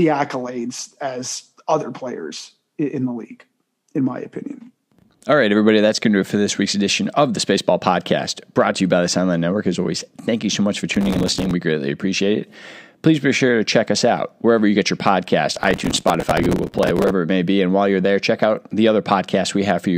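Processor overload crackle tears through the speech from 10.94 to 11.51 s and again, longer, from 15.56 to 17.1 s. Deadlines kept being missed, each leaving a sliver of repeated old audio, spaced in a way that fits buffers of about 5 ms. The waveform shows hard-edged discontinuities, and the spectrogram shows broadband vertical streaks.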